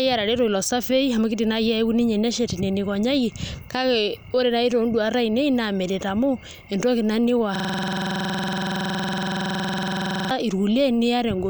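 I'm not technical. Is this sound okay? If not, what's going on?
No. From 7.56 to 10.31 s there's a system hang loop: the computer froze, replaying one 46 ms snippet 21.5 times a second.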